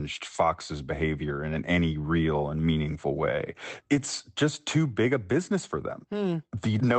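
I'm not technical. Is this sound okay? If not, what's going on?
No. From 3.91 to 4.05 s the speech briefly turns rough and noisy: a lost packet rebuilt from error correction, where a cruder backup copy filled about 80 ms of missing call audio.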